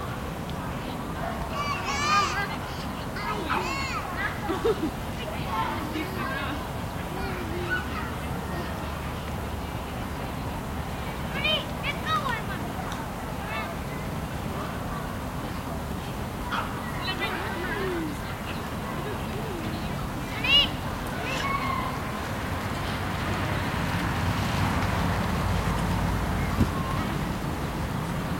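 A recording of sounds with periodic USB or driver dropouts from 0.17 s to 28.16 s: every 0.25 s, about half a millisecond goes silent, around a hundred times, giving steady ticks over the signal. Something's blocking the bus or driver on a fixed schedule.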